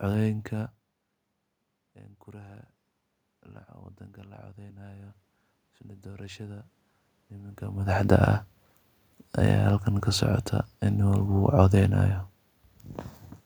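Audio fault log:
4.57 to 7.6 s, automatic gain rising: the input dropped by about 19 dB, so the gain control slowly climbed about 7 dB, lifting voice and room noise together.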